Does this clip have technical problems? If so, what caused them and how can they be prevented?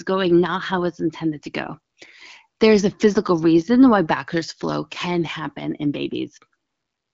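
No technical problems here.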